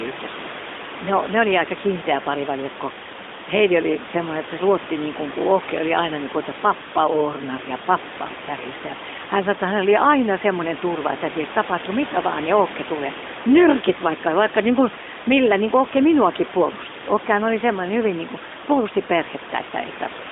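No technical faults occur anywhere in this speech clip.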